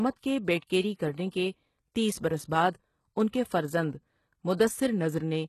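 HE-AAC compression runs through the whole speech clip. Nothing is present above 12.3 kHz, and the upper band sounds synthetic: bright but grainy, with s sounds gritty and lispy. The likely cause is heavy HE-AAC coding, which keeps only the lower spectrum and fills in the treble by copying lower bands upward under a coarse envelope. The copied harmonics don't line up with the real ones, and the strength of the damage fits a very low bitrate around 16 kbps.

Pre-echo appears from 0.60 to 0.62 s. A brief hiss, about 27 ms long, sits just ahead of a sharp onset, and the attack itself sounds softened and smeared. The codec spread the quantisation noise meant for the loud attack across its whole transform block. Because the attack landed late in that block, the noise leaked into the quiet moment before it and became audible there.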